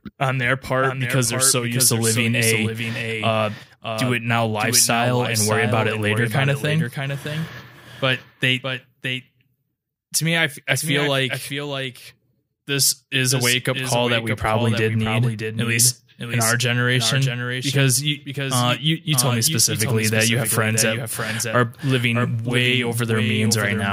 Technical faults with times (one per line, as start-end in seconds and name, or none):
0.00-23.92 doubled audio track